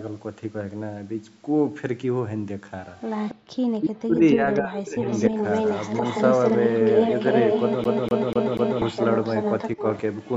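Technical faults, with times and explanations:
3.06–3.35 s and 4.54 s to the end, echo leak: a delayed copy of the voice returns, first about 277 ms late and well below the original, then about 344 ms late at roughly the same level. This is likely a far-end loudspeaker echo the canceller failed to remove. Unlike a room reflection, the copy is a distinct, separated repeat.
3.35–3.5 s, background gated by the echo canceller: the room sound falls away by about 40 dB for a brief moment, roughly a sixth of a second, then comes back. The canceller clamped the microphone while playback ran.
3.79–5.37 s and 9.76–9.80 s, speech suppressed in double talk: the talker's own voice dips in pieces. In the first stretch the drops are deep, around 40 dB, adding up to about a second. The second is a slight, very short dip. Likely the canceller mistook overlapping speech for echo, so the voice itself dips and breaks, not just the background.
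7.84–8.82 s, CD stuck on one turn: the same 244 ms slice repeats four times, with a short mute at each jump back. The laser keeps returning one track at a scratch, giving an even, mechanical stutter rather than random gaps or a smeared repeat.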